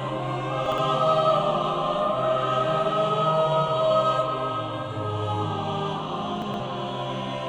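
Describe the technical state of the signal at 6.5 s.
A brief jumbled moment runs from 6.42 to 6.6 s: chunks out of order, one 60 ms chunk arriving two chunks late, leaving three hard joins.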